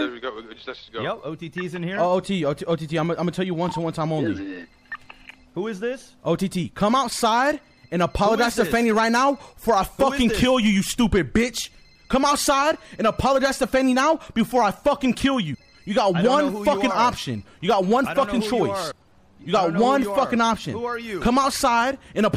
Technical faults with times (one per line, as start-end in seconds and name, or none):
15.53 compressed frames skipped
18.90 compressed frames skipped